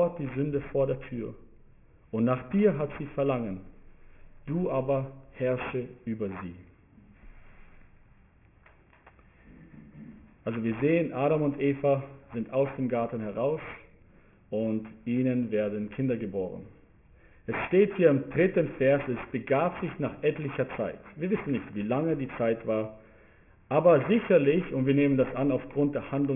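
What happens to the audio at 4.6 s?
Aliasing, present across the whole clip rather than just at 4.6 s: content above about 3 kHz folds back down as gritty, metallic false tones roughly 20 dB under the signal, which points to a drop to around a 6 kHz sample rate without a proper anti-alias filter.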